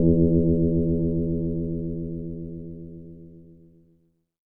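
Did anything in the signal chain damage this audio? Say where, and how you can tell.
Yes. A processing stage that splits the sound into windowed frames has left overlap-add ripple throughout. The level dips by about 60 dB around 150 times a second, a metallic buzz with extra tones around each note. On the waveform the envelope is chopped into regular notches. The spectrogram shows matching vertical striping and sidebands.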